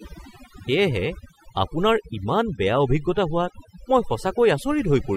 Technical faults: overdone noise removal

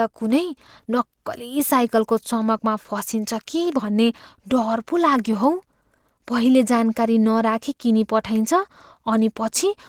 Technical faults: Opus voice compression

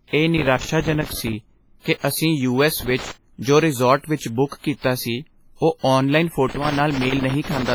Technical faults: WMA compression; loose connector crackle

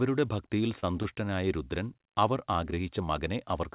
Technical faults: short concealed packet loss; short stall from a late packet

